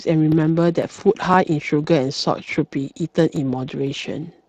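Speech coded with the Speex codec, with audible damage throughout: a hoarse, noisy grain on the voice from the CELP coder running short of bits for its excitation, and no content above 15.3 kHz. The bitrate is around 22 kbps. The roughness sits inside the voice itself rather than appearing as the swirling or warbling highs of a transform codec like MP3. On top of this, overlapping chunks cause a small stutter-click at 0.32, 0.83, 1.34, 1.84, 2.35, 2.86, 3.36 and 3.87 s. The steady spacing of about half a second shows the audio was handled in 0.5 s chunks, each starting slightly before the previous one ended, so about 7 ms is played twice at every join. A dropout would leave a brief gap at these points, but here nothing is missing and the sound repeats instead.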